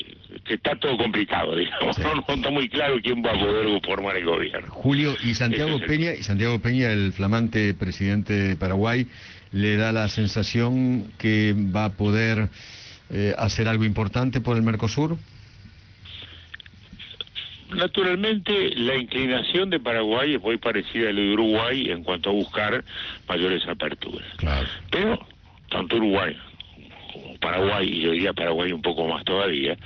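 Nothing's actually wrong with this one; the sound simply comes across as a typical internet call, with the top end rolled off at around 6 kHz in the way a low-bitrate Opus call path normally sounds.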